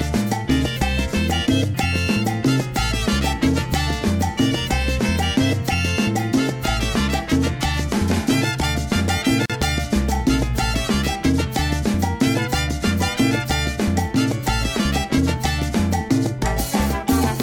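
At 9.46 s there's a gap at a join of encoded pieces: about 40 ms of silence, out to 9.50 s, where two separately encoded chunks were butted together untrimmed. The encoder's start delay and end padding survive, so the sound drops out with smeared edges, then resumes exactly where it left off.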